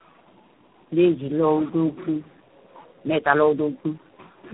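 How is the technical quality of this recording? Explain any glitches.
The technical quality is poor, with one fault present throughout the clip.

Tandem speech coding runs from start to finish. The speech sounds as if it passed through several speech codecs in a row, roughly four, which fits a chain ending in an ADPCM coder such as G.726. Each coder re-encodes the previous one's artefacts. Nothing reaches above 3.8 kHz, so the speech sounds muffled, and the stacked losses make it rough and warbly.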